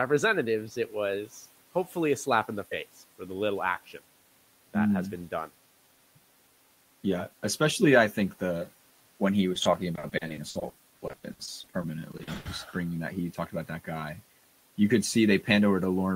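From 9.53 to 12.47 s, between "think the when he" and "just bringing that he", repeated packet loss (robotic sound) sets in. Short holes of up to 80 ms, about 840 ms in total, are patched by extending the preceding sound. Unlike a single dropout, the gaps recur rapidly, giving a choppy texture with pieces missing.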